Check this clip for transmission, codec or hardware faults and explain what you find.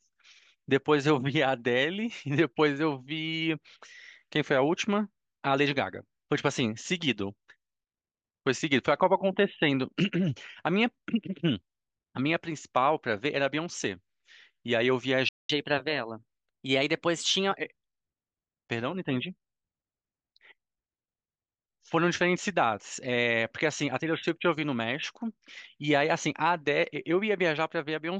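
Two faults appear, one right after the other.

At 15.29 s the sound cuts out until 15.50 s, a gap of about 0.2 s. This is a playback stall. The player likely ran dry of buffered data or its thread was blocked. The speech simply halts mid-flow, then resumes.

From 15.50 s to 17.54 s comes catch-up at higher speed. The player resamples its backlog to recover the lost time. Playback runs at 1.1 times normal speed, so pitch rises by about one and a half semitones. The speech sounds hurried and slightly higher, then settles back.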